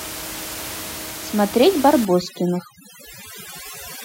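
From 2.05 s to the end, the background drops and breaks up into twinkling specks. This is overdone noise removal: an aggressive noise reduction stage pulls individual frequency bands far down or shuts them off whenever they sit close to its noise estimate. Before 2.05 s the room noise sits about 13 dB under the speech, so quieter parts of the speech are close to that estimate and are stripped away along with it.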